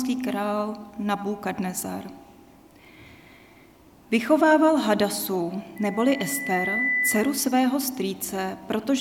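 At 5.76 s a loudspeaker feedback squeal starts: a steady 2 kHz tone swelling over about a second until it's roughly as loud as everything else, then cutting off at 7.54 s. The mic picked up its own speaker, and the loop ran away at that frequency.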